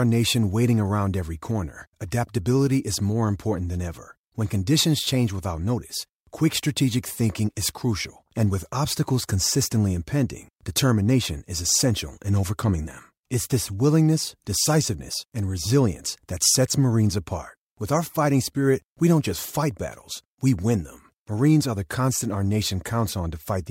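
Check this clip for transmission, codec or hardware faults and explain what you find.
Nothing in the speech signal indicates a fault anywhere along the chain.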